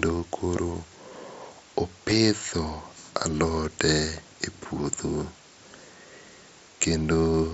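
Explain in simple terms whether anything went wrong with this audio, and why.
Concealed Bluetooth headset packet loss occurs at 1.09 s and again at 2.10 s. Each time, about 7.5 ms of voice went missing on the wireless link between headset and phone, which fits a single lost packet. The phone filled the gap by repeating the best-matching piece of the sound it had just received. Because each gap is so short, the patch-up is nearly invisible, heard at most as a tiny blip in the speech.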